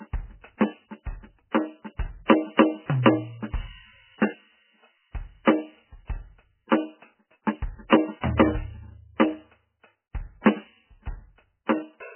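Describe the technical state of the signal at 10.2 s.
At 10.2 s the music, like the whole clip, has nothing above about 3.1 kHz and sounds heavily watery and swirly, likely from MP3 compression at a very low bitrate near 10 kbps. Unlike a plain low-pass filter, weak frequency lines flicker between frames and attacks smear.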